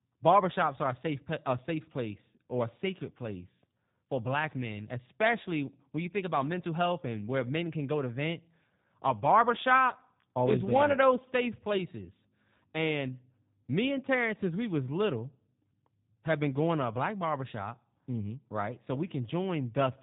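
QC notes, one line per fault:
Throughout: G.729 codec damage, with nothing above 3.8 kHz and a rough, synthetic speech texture that fits an 8 kbit/s filter-and-pulse model.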